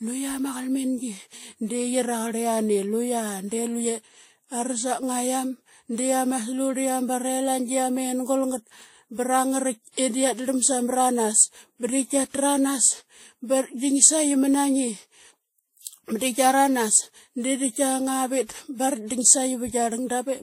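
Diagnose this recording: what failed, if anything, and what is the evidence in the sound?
The failure is at the codec stage, and it runs through the whole speech clip. Nothing is present above 16.5 kHz, a hard ceiling, the lowest cut-off in the chain. Two kinds of coding artefact sit on top of each other, heard together. The likely cause is transcoding between lossy codecs. A first encode, which fits WMA 1 at around 64 kbit/s, was re-encoded to Vorbis at around 43 kbit/s. The second coder spent its smaller budget on the first coder's artefacts.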